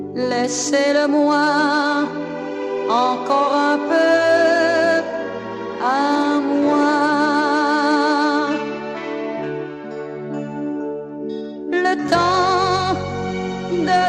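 Nothing is technically wrong with this audio.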